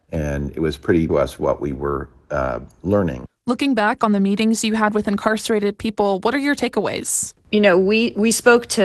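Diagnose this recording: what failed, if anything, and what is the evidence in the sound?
At 1.1 s the sound jumps forward with no gap, about 0.7 s of material simply missing and the two sides butted together. This is a skip ahead in the network and jitter-buffer stage: a block of audio was dropped while newer audio was already queued.

From 2.85 to 4.21 s the sound runs about 9% fast at unchanged pitch, hurried rather than higher. This is a jitter buffer speed-up. The receiver trimmed short pitch-period slices repeatedly, shedding about 150 ms of excess buffered delay. The Opus call path limits the band to about 12 kHz throughout.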